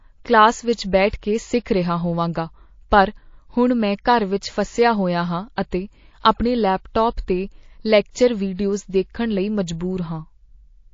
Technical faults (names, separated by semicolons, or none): MP3 compression; pre-echo